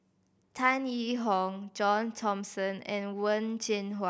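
No technical faults can be heard anywhere in the speech. At no point does anything in the recording stand out as a problem.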